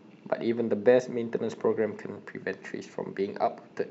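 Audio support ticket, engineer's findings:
No faults found in clip.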